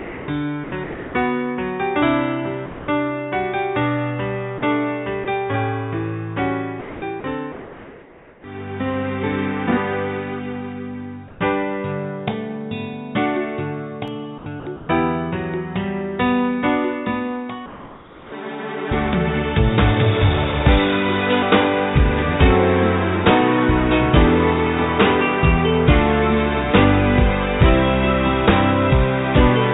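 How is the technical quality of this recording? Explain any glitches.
The recording has repeated gating dropouts and one tiny digital gap. The audio passed through a narrowband call path with nothing above 4 kHz, consistent with G.711 at 64 kbps.

Sound chopped by the voice detector, 0.00–1.14 s, 6.80–8.44 s and 14.38–14.88 s: the sound flickers between real audio and synthetic hiss several times within each stretch, most likely because the sender's voice detector kept toggling transmission on and off. The repeated switching is what separates this from a single dropout.

Sound dropped by the voice detector, 2.66–2.88 s, 4.58–4.62 s and 5.24–5.26 s: each is one clean gap of 220, 40 and 20 ms, where the sound gives way to steady noise and then returns. The likely cause is the detector mistaking quiet material for background and pausing once. Unlike the chopping, nothing flickers.

Comfort noise in place of the background, 11.28–11.40 s and 17.66–18.32 s: the real background, sitting about 21–23 dB below the loud passages, is replaced by flat, featureless noise about 3 dB and 2 dB quieter. 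This is likely discontinuous transmission filling the pause. Only the background is swapped here, and no foreground sound is lost.

Block of digital silence, 14.08 s: a 0.67 ms block of silence with hard edges, which fits a 32-sample block the output buffer missed. It is heard as a single tick rather than noise, which distinguishes it from the detector gaps.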